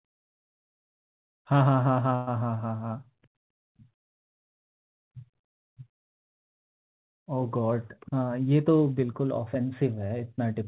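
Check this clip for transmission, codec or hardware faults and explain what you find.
One transmission fault stands out in the speech. From 2.15 to 2.30 s the sound smears into a held, fading tail, then jumps ahead. That is a burst of packet loss: about 120 ms never arrived, so the receiver stretched and faded the last received audio for about 117 ms before playback resumed further on. Throughout the clip nothing is heard above 4 kHz, which fits a G.711 call path.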